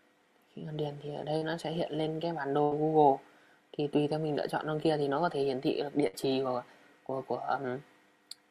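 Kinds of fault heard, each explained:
Short concealed packet loss: A few packets arrived too late for the decoder, and the receiver extended the preceding sound to cover the hole before blending back. At 1.37 s, 40 ms is synthesised in place of 40 ms of lost audio, heard as a brief smear.
Burst of packet loss: A longer run of packets was lost, so the receiver continued the last sound while turning it down, then resumed further on. At 2.63 s a 77 ms fill replaces 80 ms of audio; at 6.07 s, 60 ms replaces 60 ms.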